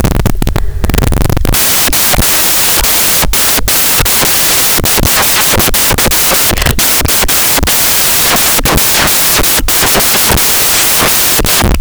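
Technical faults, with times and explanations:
Throughout: samples built from the wrong bytes. The reader assembled each sample from misaligned or reversed bytes, so the rapidly changing low-order byte of every value ended up in the most significant position. The result is loud, harsh broadband noise, close to white on the louder passages of the speech.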